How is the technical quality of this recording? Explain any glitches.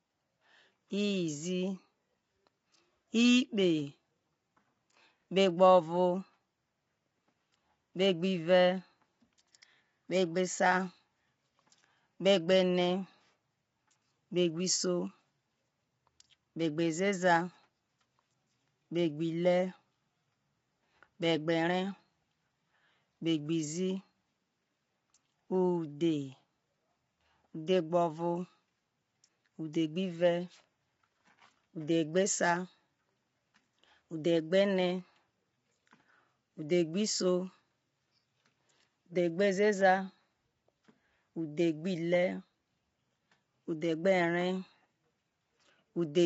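The recording has plainly audible coding damage throughout. Across the whole clip the speech sounds rough and grainy, with noise filling the gaps between harmonics and nothing above 7.7 kHz. This is likely low-delay AAC compression (AAC-ELD). Its short frames resolve pitch harmonics poorly, and the degree of damage points to a low bitrate of around 24 kbps.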